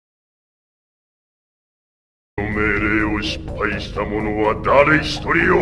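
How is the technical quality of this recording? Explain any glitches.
The recording has one clear glitch at the start. Audio dropout to silence, 0.00 to 2.37 s: the clip opens in dead silence with no room tone, most likely because the input was lost while recording continued, and the sound begins abruptly.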